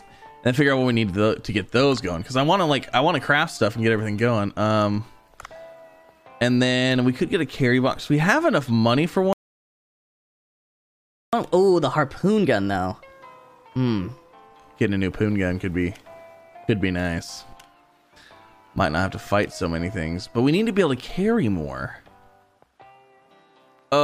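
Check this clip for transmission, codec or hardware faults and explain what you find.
Two related faults appear, a playback stall followed by catch-up at higher speed.

From 9.33 to 11.33 s there is a playback stall. The player likely ran short of data or had its output thread blocked, so the audio cuts off in mid-flow and falls silent for 2 s before resuming.

From 11.33 to 14.33 s comes catch-up at higher speed. To recover the lost time, the player resamples its backlog at 1.15 times normal speed, so the sound runs noticeably faster and sits roughly two semitones sharp before dropping back to normal pitch and tempo.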